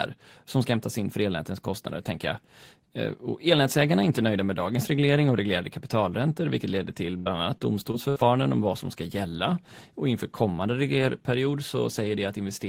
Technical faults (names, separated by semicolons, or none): repeated packet loss (robotic sound)